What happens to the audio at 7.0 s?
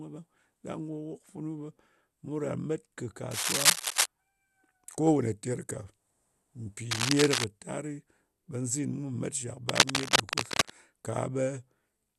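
From 6.90 to 7.44 s there is cable scratch noise: dense, uneven rustling about as loud as the speech, likely from a worn contact shifting. It is dense, bursty scratching, not isolated clicks. Underneath, throughout, MP2 compression dulls the speech, with nothing above 12.2 kHz and a gurgling granularity, likely from Layer II coding at a rate around 80 kbps. It sounds grainier than MP3 smearing.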